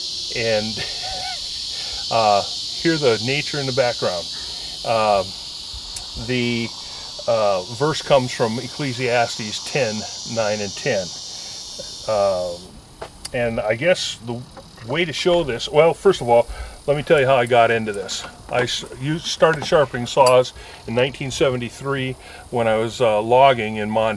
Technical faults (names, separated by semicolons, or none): none